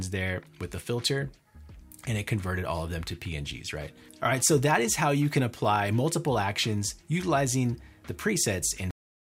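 The sound stops abruptly at 8.91 s, in the middle of what is playing, and the remaining 0.43 s or so is digital silence. This is a cut-off end: the final buffers were never written or played back, so the audio simply ends instead of finishing. Unlike a fade-out or a natural ending, there is no decay or tail. The level falls from full to nothing at once. Unlike a mid-clip dropout, the sound never returns.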